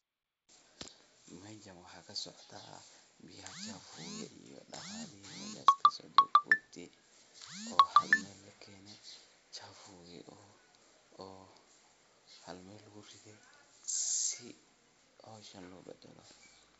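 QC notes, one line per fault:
The speech comes through G.722 wideband coding at 64 kbit/s with no faults, its bandwidth ending near 7.7 kHz, as that wideband telephone path allows.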